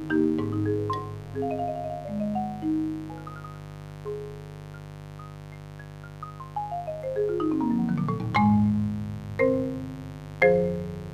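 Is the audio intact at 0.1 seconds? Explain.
No. At 0.1 s a mains buzz is already present, and it runs through the whole clip. Sharp switching spikes on a 50 Hz supply add harmonics reaching several kilohertz. The result is a steady, raspy buzz, roughly 15 dB below the sound.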